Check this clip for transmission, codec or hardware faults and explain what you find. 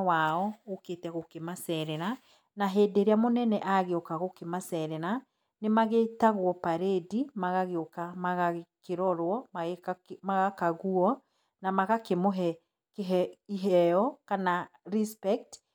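Nothing in this speech recording stands out as a fault, so there's nothing to flag here.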